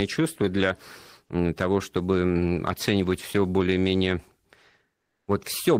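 From 4.97 to 5.27 s, a pause in the speech loses its real background. For about 300 ms, comfort noise in place of the background fills the gap. The room detail vanishes. A flat, featureless hiss takes over, about 8 dB different in level from the true background. That background already sits about 65 dB below the loudest speech. The likely cause is Opus discontinuous transmission: the sender stopped sending during the pause, and the receiver made up synthetic noise until the speech resumed.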